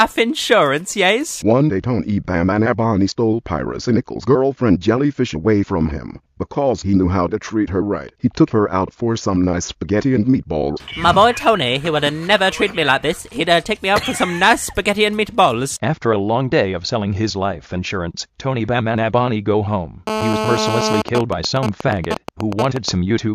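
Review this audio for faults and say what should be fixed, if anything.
A hard, raspy buzz at 217 Hz, rich in harmonics, sits about 2 dB below the programme from 20.07 to 21.02 s. This is GSM phone buzz: a 2G phone in a call nearby transmits 217 bursts per second, which the audio circuit rectifies into audible pulses.

From 21.08 to 22.89 s the steady buzz becomes even ticks with a longer buzz twice a second, roughly as loud as the programme. These are GSM signalling bursts, sent while the phone stays in the call but its user is silent, and rectified the same way.

Keep mobile phones switched off or in flight mode near the recording chain, and use balanced, well-shielded cabling to reduce RF pickup.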